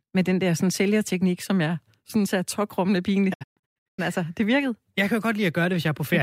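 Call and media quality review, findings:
Digital broadcast dropout, 3.32–4.00 s, after "synes er tokrummende pinligt": scattered muted holes with 20 ms fades, longest 128 ms. The receiver muted on failed frames, and audio resumes at "altså det virkede".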